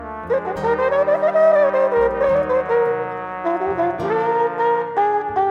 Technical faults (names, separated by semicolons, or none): none